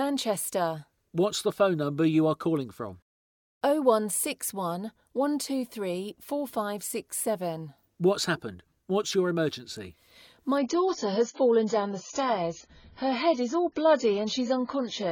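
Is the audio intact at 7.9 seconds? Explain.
Yes, the audio is intact at 7.9 seconds, with no dropout, click, distortion or other fault at that moment.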